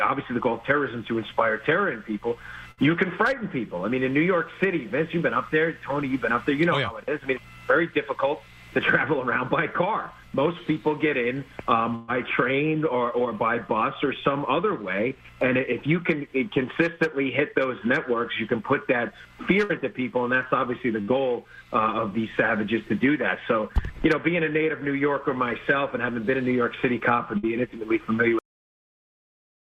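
Bursts of packet loss occur at 2.71, 11.95, 19.64, 21.01 and 27.38 s. Each time, the receiver stretches the last sound into a fading buzz or hiss, then resumes further on. About 60 ms of audio is missing each time, and about 120 ms at 11.95 s. Unlike a plain dropout, the gap is filled.

At 28.39 s there is a cut-off end: the final buffers never played, so the audio stops mid-sound and drops straight to digital silence. Unlike a fade-out or natural ending, there is no decay.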